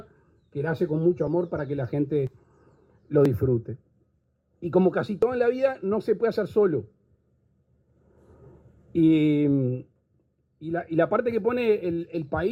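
Small skips fall at 1.27, 2.27, 3.26, 4.24, 5.23 and 8.18 s, mostly about one second apart, matching 1-second stream segments. These are overlap between stream segments: mistimed boundaries make the player discard a few milliseconds of sound, so the waveform jumps.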